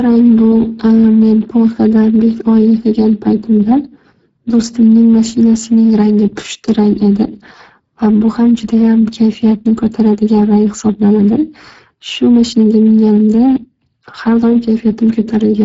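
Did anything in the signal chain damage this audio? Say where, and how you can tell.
Yes: the codec stage damaged it. Speex coding throughout, at a bitrate consistent with about 10 kbps, starves the excitation, making speech noisy and hoarse, with nothing above 7.6 kHz.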